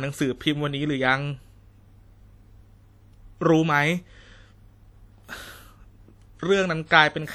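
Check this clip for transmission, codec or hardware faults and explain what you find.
One codec fault runs through the whole speech clip, likely WMA compression, and the damage is plainly audible. The long transform blocks smear quantisation noise over tens of milliseconds. The result is ringing, washy sound with hiss that breathes with the signal, which fits a 48 kbps stream. Band-limiting would remove the treble, but here content reaches about 20.1 kHz, so the damage is smeared noise rather than a dulled top end.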